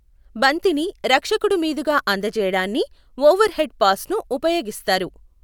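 Nothing in the recording stood out as a technical problem on listening.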